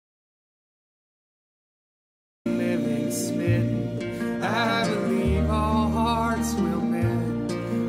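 From the very start through about 2.46 s there's an audio dropout to silence: dead silence, no room tone at all, then the sound just kicks in mid-flow. Most likely the input was lost while the recorder kept writing.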